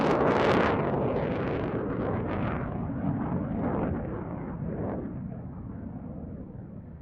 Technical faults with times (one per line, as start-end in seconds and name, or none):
none